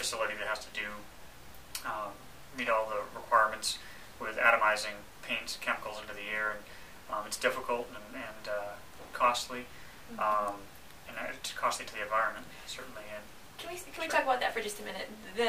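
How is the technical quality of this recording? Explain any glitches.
No glitches can be heard anywhere in the recording. Nothing in it calls for a technical explanation.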